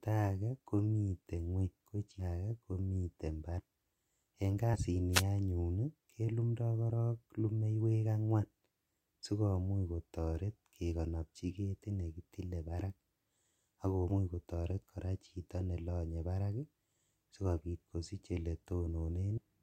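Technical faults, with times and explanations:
2.19, 3.59, 4.73 (just before "anyun kelumdo"), 14.09 (just before "kotoret kora chito nelonye") and 19.37 s, compressed frames skipped: the speech lurches forward. Whole 20 ms frames went unplayed, losing roughly 300 ms at the first two points, about 70 ms at 4.73 and 14.09 s, and about a tenth at 19.37 s.
5.12 to 5.23 s, just before "anyun kelumdo", wireless microphone noise hit: a short swish of static rises over the speech as the FM radio link fades and receiver noise briefly takes over.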